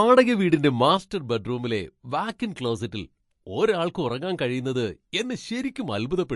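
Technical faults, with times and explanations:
Throughout: MP3 compression. The speech is plainly damaged by lossy coding, and nothing is heard above 11.3 kHz, which fits a low bitrate of around 49 kbps. The encoder has too few bits, so it removes the treble above a fixed point and drops weak spectral components. Those components come and go from frame to frame, which gives a watery, swirling texture, chirps on sibilants and softened attacks. Heavy MP3 encoding is the likely cause.
0.97 s to the end: one channel drops out. From here on the level falls abruptly by about 6 dB and stays down. The step fits the loss of one stereo channel before a mono sum: material common to both channels arrives at half strength, and anything carried only in the lost channel disappears completely. A dropped channel is the likely cause. The sudden, sustained drop lasts through to the end of the clip.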